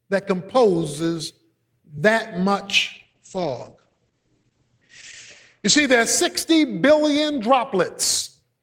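From 2.94 to 5.85 s a call bitrate drop sets in: the sound turns rough and muffled, consistent with the encoder falling from about 32 to 9 kbps. A spectrogram shows energy above 8 kHz vanishing, a flat ceiling replacing the 20 kHz band, until recovery.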